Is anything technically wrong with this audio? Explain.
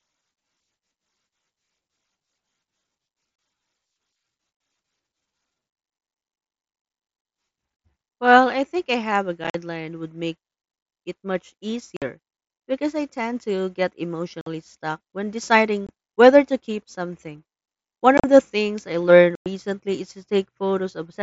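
Yes, there is unconcealed Bluetooth headset packet loss. The wireless link between headset and phone dropped short bursts of voice packets, and nothing filled the gaps. The speech simply cuts out with hard edges at 3.36 s (30 ms), 4.57 s (30 ms), 9.44 to 9.55 s (60 ms scattered as broken chop), 11.97 s, 14.41 s, 15.87 s (about 22 ms), 18.18 to 18.24 s (scattered) and 19.35 to 19.46 s (105 ms). These gaps sound like abrupt dropouts in the wideband mSBC speech, which reaches up to 8 kHz.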